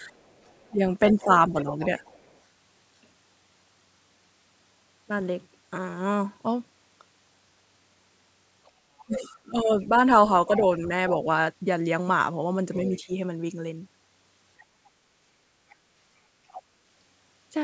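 Speech suppressed in double talk runs from 0.00 to 2.01 s, while the other side's voice leaking through comes in faintly from 0.27 to 2.39 s, about 25 dB below the speech. With both sides talking at once, the echo canceller likely couldn't tell the near talker from the loudspeaker echo and turned everything down. The speech dips by up to about 10 dB in pieces adding up to roughly half a second.

From 8.65 to 10.86 s the other side's voice leaks through much more strongly, only about 15 dB under the speech. This is likely residual echo that the canceller failed to remove from the microphone. Overlapping it, from 9.06 to 11.19 s, the speech is suppressed again in double talk. The drops reach about 15 dB and add up to roughly 0.7 s.

Short leaks follow at 12.74 to 12.97 s, at about 20 dB down, and at 14.60 to 14.64 s, a scrap about 35 dB down. Between them, at 13.06 to 13.10 s, a brief suppression of about 15 dB clips the speech for around 40 ms. 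A final longer leak runs from 15.70 to 16.62 s, about 20 dB below the speech. The whole clip passes through call microphone processing, with nothing above 8 kHz.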